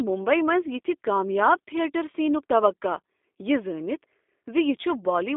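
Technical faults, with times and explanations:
Throughout, G.729 codec: rough, slightly synthetic speech held to roughly 250 Hz to 3.6 kHz, consistent with 8 kbit/s G.729A rebuilding each frame from a few pulses.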